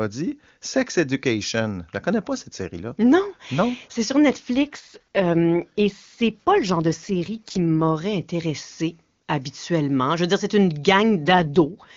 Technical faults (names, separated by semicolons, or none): AMR rate drop